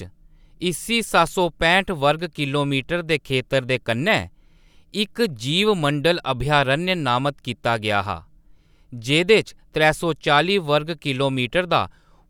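Speech with one bit error spike at 1.27 s, just before "सौ पैंह्ट": a flipped bit over three samples gives a broadband tick, unlike a dropout's gap or a clipping burst.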